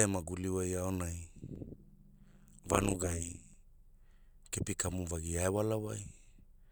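A speech recording where, after "e maguli wai aonai", from 1.56 to 3.54 s, the level ripples around 150 Hz, heard as a metallic buzz with extra tones around the voice, swinging by about 60 dB. This is overlap-add ripple: frames were rejoined with windows whose overlap doesn't sum to constant gain.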